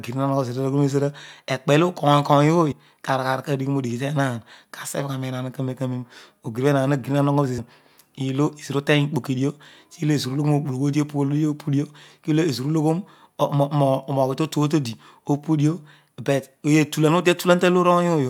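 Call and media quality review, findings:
Damaged data in a compressed stream, 2.71–2.73 s: brief glitch, about 20 ms, breaking into the speech. Probable component: decoder input. Corrupt bytes make frames unreadable, so the decoder loses sync and has to find the next frame header.

Same fault at 7.57 s: short blip under 20 ms, same signature. Probable component and mechanism as above: bad compressed frames misread or dropped until the decoder resynchronises on a valid header.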